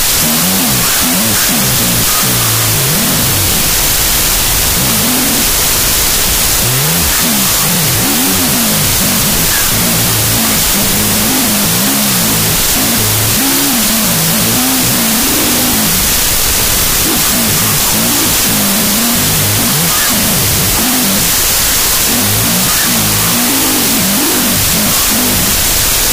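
Loud, dense noise runs from start to finish, with the original sound buried inside it at half speed and an octave low. This is a wrong sample width fault: 32-bit float data read as 16-bit integers, splitting each value into two mismatched samples.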